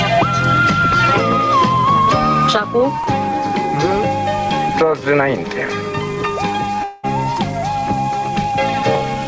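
At 3.04 s the sound lurches forward by a few milliseconds, and the same tiny jump returns at 7.37 s. Both are likely dropped buffers (overrun): the recording software fell behind, the hardware overwrote a small block of samples before it was read, and the audio on either side was joined with no gap. That splice is what makes the jump, and the loss of roughly 3 ms is too brief to take out a whole sound.

From 6.84 s to 7.05 s the sound smears into a fading buzzy tail instead of continuing, then resumes further along. This is likely a long network dropout on the call path: about 200 ms of audio never arrived, and the receiver filled almost all of it, 194 ms, by stretching out the last sound it had. It never fell to true silence before the stream recovered, and the missing stretch is simply skipped. Throughout, the band stops at 8 kHz, as expected from a G.722 call codec.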